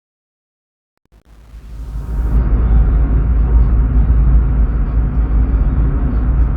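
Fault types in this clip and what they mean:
Truncation distortion on a fade: the fade-in keeps only about 8 bits with no dither, so its quiet opening up to 2 s goes gritty.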